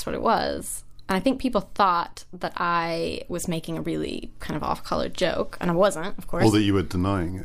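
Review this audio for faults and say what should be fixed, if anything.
At 4.25 to 4.27 s in this speech clip, between "I was making a" and "kind of off color", there is a short blip caused by damaged data in a compressed stream. Some bytes of the encoded file were lost or overwritten there, so the decoder could not parse those frames correctly, lost sync and had to search for the next valid frame header, producing roughly 26 ms of garbled output. To prevent it, verify file integrity with checksums after transfer and re-encode from the original source.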